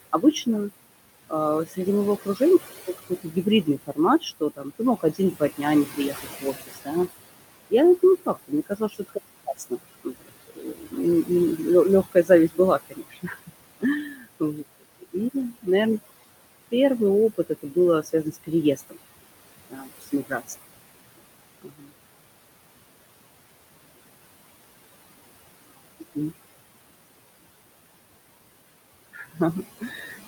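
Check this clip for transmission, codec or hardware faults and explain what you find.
Two faults are present, both from a noise suppressor rather than from transmission, codec or hardware.

Noise suppressor artifacts, throughout: the room noise, about 14 dB below the speech, pumps, dropping by about 20 dB in pauses as the suppressor attenuates bands it judges stationary.

Speech cut by the noise suppressor, at 1.3–7.08 s, 7.7–15.68 s, 17.35–18.97 s, 19.7–20.52 s, 21.62–21.92 s and 29.13–30.27 s: quieter syllables sound swallowed, dipping by about 15 to 21 dB. The suppressor mistakes that speech energy for noise. Roughly two seconds are affected in the longest stretch.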